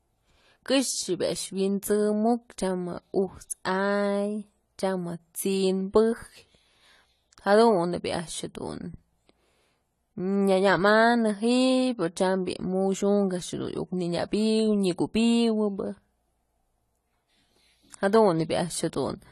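From start to finish the speech has a hard ceiling at 14.1 kHz, with the upper bands sounding hollow and a fizzy, warbling texture on sibilants and held vowels. The likely cause is AAC compression, with AAC-LC quantising each frame's spectrum coarsely at a rate that points to about 32 kbps. Unlike a simple low-pass filter, which only dulls the top, this smears and churns the remaining detail over time.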